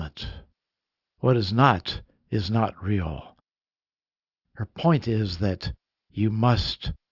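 From the first moment to the end, the speech carries aliasing. It sounds like the audio was dropped to a much lower rate with no filter first, which fits a cut from 48 kHz to 12 kHz, so anything above 6 kHz folds back below it as stray, unrelated tones. You'll hear it as a gritty, metallic edge on the s and sh sounds, sitting maybe 30 dB under the speech, with the top end running flat-out right up to 6 kHz.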